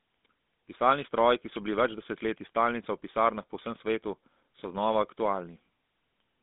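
From start to finish the speech carries GSM full-rate codec damage. The line band runs from 200 Hz to 3.6 kHz, with nothing above 3.8 kHz. Regular-pulse excitation modelling makes the voice plainly buzzy and gravelly, which fits a 13 kbps coder.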